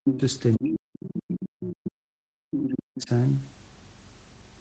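A speech recording in which the talker is repeatedly turned down while a second voice intrudes. Speech suppressed in double talk occurs from 0.0 to 0.22 s and again across most of 0.58 to 3.1 s, with the level falling by roughly 40 dB at its deepest. The cause is likely an echo canceller that could not separate the near talker from loudspeaker echo during overlap and so attenuated both. This differs from packet loss or a dropout because the dips follow the overlap. The other side's voice leaking through appears at 0.54–0.7, 0.94–1.1, 1.61–1.76, 2.52–2.72 and 2.97–3.01 s, between about 5 and 15 dB below the talker, loudest at 0.54 s and 2.52 s. These are scraps of a different voice, not a delayed copy of the talker, which points to them likely being residual far-end echo rather than room reverberation. Nothing is heard above 8 kHz, which is consistent with the call's codec band limit.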